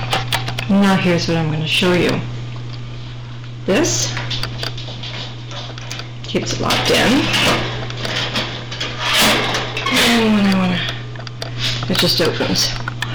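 Hard clipping runs through the whole clip. The signal drives a stage about 26 dB past what it can pass, so around a tenth of the samples are cut flat. Those flattened peaks add high harmonics. Every loud moment turns into harsh fuzz.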